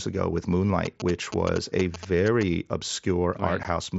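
From 0.85 to 2.43 s, GSM signalling bursts break into the speech. A nearby 2G phone's radio pulses are rectified, giving a galloping 217 Hz buzz roughly 10 dB below the voice.

At 3.63 s comes unconcealed Bluetooth headset packet loss. A 15 ms gap opens abruptly, which fits two lost packets, leaving a hole in the mSBC-coded speech.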